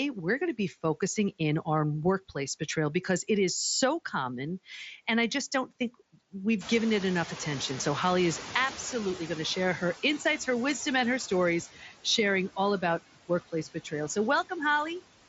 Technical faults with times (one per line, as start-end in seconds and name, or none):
0.00-15.28 noise suppressor artifacts
6.60-9.17 noise suppressor catching up
11.75-12.06 speech cut by the noise suppressor
13.52-14.17 speech cut by the noise suppressor